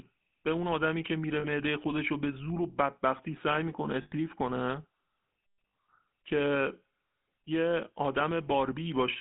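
Throughout, the speech has a buzzy, gravelly roughness confined to a narrow band of about 200 Hz to 3.5 kHz. That is the GSM full-rate codec, which fits a 13 kbps pulse-driven vocal-tract model. At 1.40, 4.02 and 5.68 s, lost GSM frames cause rough, metallic rings lasting 40, 100 and 60 ms, where the last good frame's settings were repeated.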